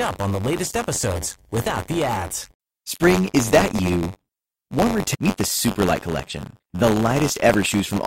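Buffer tearing runs throughout the speech. The writing program and the hardware reading the ring buffer have slipped, so each period carries a small slice of audio from about 30 ms earlier. The hard joins make a 93.8 Hz rattle, consistent with a 512-sample buffer. Unlike mains hum, it disappears in pauses.

At 5.13 to 5.16 s the sound jumps abruptly ahead with a small blip, most likely a stream segment skipped: one segment failed to load and the player moved on to the next. Unlike a dropout, no silent gap marks the spot. The programme simply continues from later.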